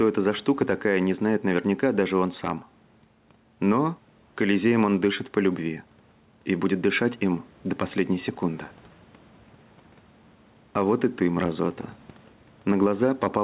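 Gain pumping runs through this speech clip from start to finish. The input gain is likely set far too high for the microphone, so a fast limiter or compressor clamps down on each loud syllable and releases in the pauses. The gain swings by around 5 dB, and the level contrast is squashed into a flat, breathing texture. The room noise sits about 36 dB below the speech. The whole clip is also band-limited with nothing above 4 kHz, which points to a narrowband G.711-style call codec at around 64 kbps.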